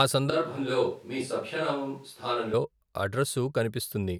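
From 0.30 s to 2.53 s the close microphone's signal most likely dropped out of the mix, leaving a switch to a distant microphone, perhaps one on the camera, picking up the talker from further away. The speech turns hollow and roomy at once, loses its low end, falls roughly 5 dB in level, and carries more room noise, sitting around 35 dB below the speech. The change at each end is abrupt.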